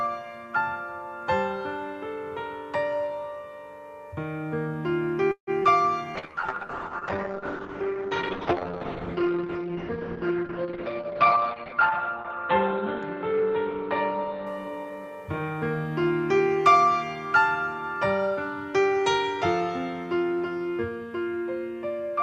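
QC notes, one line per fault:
5.31–5.50 s, call audio freeze: the sound stalls for about 0.19 s, trailing off as a fading continuation of the last sound and then roughly 90 ms of silence before resuming where it stopped. This is likely delayed packets draining the jitter buffer, inserting a gap rather than losing material.
5.63 s, short concealed packet loss: about 40 ms of audio failed to reach the decoder in time and only a brief synthetic fill covers it, heard as a short smear or wobble as the receiver extrapolates the previous sound and blends back into the real signal.
6.17–16.77 s, call bitrate drop: the encoder rate falls from 64 to 7 kbps, holding at the bottom for about 5.9 s, and audio bandwidth narrows from 20 kHz to 4 kHz. The sound turns muffled and coarse, with watery coding artefacts, until the rate recovers.
10.75–11.69 s, jitter buffer speed-up: playback runs at about 112% speed with pitch unchanged, as the receiver trims short pitch-period segments to shed excess buffered delay, roughly 150 ms in total. 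The result sounds hurried.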